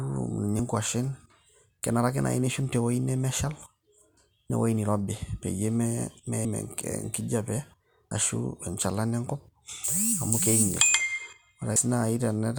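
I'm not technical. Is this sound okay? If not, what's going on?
No. The speech has compressed frames skipped at 0.59, 4.50, 6.45, 8.11 and 11.76 s. Short chunks of sound are simply missing, about a thirtieth of a second at the first two and roughly a tenth at the last three. Unlike a dropout, there's no silent gap, only a sudden jump forward in the speech at each spot.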